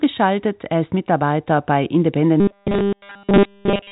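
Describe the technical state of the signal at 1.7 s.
At 1.7 s the signal is intact, with no fault to be heard; the speech carries the narrow telephone band of G.711 coding, with nothing above about 3.8 kHz.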